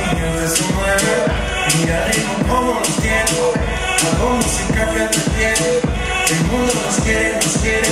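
Nothing stood out as a technical problem on listening.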